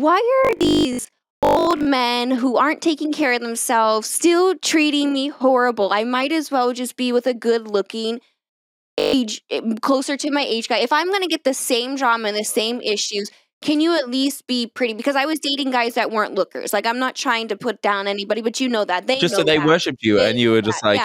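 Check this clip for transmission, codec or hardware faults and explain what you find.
Two stretches show robotic sound from repeated short buffers, at 0.45 to 1.89 s and 8.45 to 9.13 s. In both, the audio turns rigid and metallic, with a steady 50 Hz buzz laid over it. The likely cause is audio arriving too slowly, so the playback repeats a fragment of about 20 ms to fill the gaps. Most of the real audio in those spans is skipped. The repeats impose that fixed 50 Hz buzz while the sound only loosely follows its original shape.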